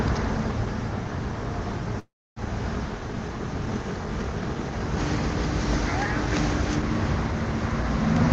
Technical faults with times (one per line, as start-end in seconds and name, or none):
1.99-2.39 call audio freeze